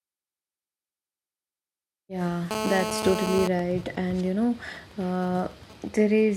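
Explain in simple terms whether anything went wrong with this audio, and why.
Two kinds of interference from a nearby mobile phone spoil this speech recording.

From 2.51 to 3.47 seconds there is GSM phone buzz: a harsh, raspy drone at 217 Hz, nearly as loud as the speech itself. An older 2G phone on a call was sending radio pulses 217 times a second, and the recording circuitry picked them up and turned them into sound. Because the phone was transmitting continuously, the buzz holds steady for that whole second.

From 3.47 to 6.24 seconds the sound changes to GSM signalling bursts, even ticks with a longer 217 Hz buzz twice a second, much quieter than the earlier drone. The phone was still on its call, but its user had stopped talking, so it switched to sending only occasional short groups of pulses. The recording circuitry caught each group as a brief tick or buzz.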